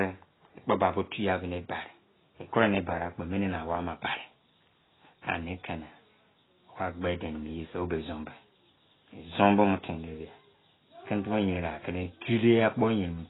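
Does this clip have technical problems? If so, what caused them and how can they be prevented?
Yes. Throughout the speech, nothing sounds above 3.9 kHz, and what remains is dull, smeared and warbly, likely heavy AAC compression at a bitrate that fits around 16 kbps. A simple low-pass filter would also remove the top end, but it would leave the remaining band clean rather than watery. Encoding at a higher bitrate, around 64 kbps or more for speech, would prevent this.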